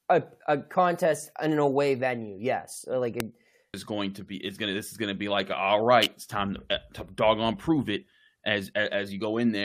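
At 3.20 s a single sharp snap sits on top of the speech, an electrical switching spike, likely from a nearby switch or static discharge arcing into the audio line. At 3.73 s, just before "is going to be", a stream segment skipped: a small blip and an abrupt forward jump in the speech, likely because one segment of the stream failed to load and playback resumed with the next. From 6.03 to 6.05 s, between "gonna be like all" and "it's time", a second switching spike adds a brief, tight cluster of clicks over the speech, likely from the same kind of arcing.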